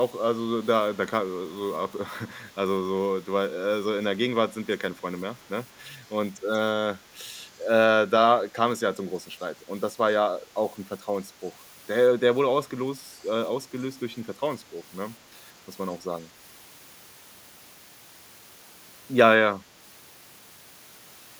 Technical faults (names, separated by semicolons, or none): echo leak